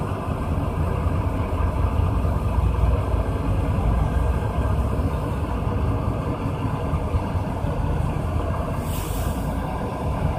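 The audio has a doubled audio track from start to finish. A second full-band copy trails the original by about a fifth of a second. It sits roughly 5 dB below the main signal. Every onset is heard twice, like a flat, exact slapback. The repeat carries no decay or room colour, so it is not a natural echo. The likely cause is the same signal captured again through a slower path, or two misaligned copies left in an edit.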